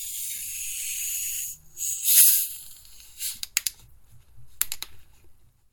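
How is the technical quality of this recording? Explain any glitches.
One glitch stands out: a brief Bluetooth stutter at 4.74 s. A short stretch of data, about 14.5 ms, arrived late or not at all, and the receiver filled the gap by replaying its last chunk of audio, which points to a single lost packet. It is heard as a tiny catch or click-like hiccup. On a waveform, a short segment repeats itself exactly. A spectrogram shows a thin vertical seam where the texture briefly duplicates before the sound carries on.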